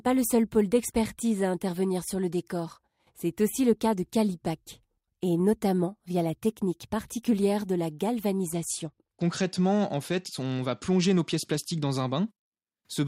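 From 8.47 to 11.91 s, after "technique particulière de la", a Bluetooth SBC bit pool drop starves high sub-bands: dull, gritty sound, spectrogram treble thinning.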